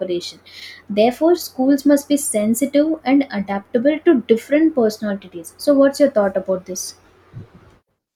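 Speech with chunks out of order between 0.54 and 0.62 s. Within that 80 ms window, one 20 ms block of audio plays three chunks later than it should, after material that belongs behind it. No audio is missing, but the sequence is scrambled, so the sound briefly jumbles. The reordering leaves three abrupt splices where waveforms meet without continuity. This points to a buffering or write-ordering error in the capture or transport path.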